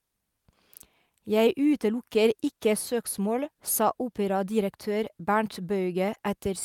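Throughout the speech, the sender's audio clock runs faster than the receiver's, by roughly 4 percent. This clock drift between sender and receiver makes the jitter buffer steadily overfill, so the receiver must keep discarding small slices of audio to avoid falling behind.

From 0.12 s to 6.49 s, those repeated timing corrections take the form of a chain of brief, unevenly spaced cuts, all trimming audio. The net effect is playback pushed along at about 104 percent, with a faintly hurried, unsteady rhythm and occasional tiny hiccups.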